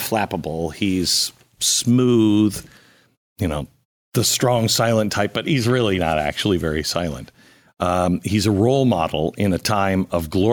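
Nothing goes wrong anywhere in this bit of speech; there are no technical faults to point out at any moment.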